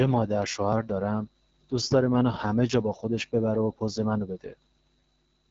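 Speech running through an AMR wideband (HD Voice) codec for its whole length, with no content above about 7.6 kHz. The band is modelled coarsely enough to leave plainly audible rough, raspy coding damage, which fits AMR-WB's low 8.85 kbit/s mode.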